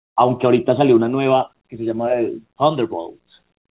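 No technical faults can be heard anywhere in the speech. It comes over a working call path, with nothing above 4 kHz and the companding grain of a narrowband telephone codec, which fits G.711 mu-law at 64 kbps.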